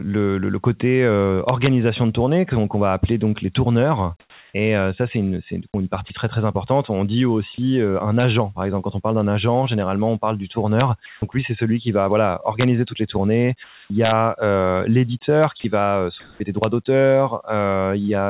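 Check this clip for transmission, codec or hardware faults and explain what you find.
There are real problems here: repeated integer overflow cracks plus several voice-detector artefacts, all riding on a narrowband call path that stops at 4 kHz, which fits G.711 mu-law at 64 kbps.

Integer overflow shows up seven times: 1.49 to 1.67 s (just before "de tournée qu'on va"), 8.20 to 8.23 s (between "dit aussi un" and "par exemple quand on"), 10.80 s, 12.61 to 12.64 s (between "celui qui va voilà" and "toutes les tournées"), 14.05 to 14.12 s, 15.44 s and 16.64 s. The loud peaks only go about 0 to 1 dB past the largest integer the sum could hold. Instead of being limited, the sample values wrap round to the opposite sign, so each overshoot jumps across the whole range. You hear harsh, snapping cracks that are far nastier than ordinary clipping.

Sound chopped by the voice detector affects 4.2 to 6.1 s. 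Over that stretch the sender keeps flipping between transmitting and going quiet, and about 360 ms in total gets swapped for comfort noise. The likely cause is a voice detector that's too jumpy on the quieter parts of the speech. It comes across as choppy.

Comfort noise in place of the background appears at 11.06 to 11.22 s, 13.64 to 13.90 s, and across 15.6 to 16.4 s, where about 240 ms is affected. The real background sits about 31 to 34 dB below the loud speech. The likely cause is discontinuous transmission: the sender stops sending in the pauses and the receiver fills them with shaped noise. The texture goes smooth and featureless, and in the 13.64 s gap it's about 1 dB quieter.

Onset clipped by the voice detector happens at 11.20 to 11.22 s, right as the comfort-noise fill ends. The first 20 ms or so of the returning speech is missing, most likely because the detector was a beat late noticing that sound had resumed. 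The speech snaps in abruptly, without its soft start.

Sound dropped by the voice detector occurs at 15.60 to 15.64 s. About 40 ms is replaced, and roughly 30 ms of actual speech is lost in that window. It's likely the detector mistook a quiet tail of speech for background and cut transmission. The speech briefly gives way to steady noise before the fill carries on.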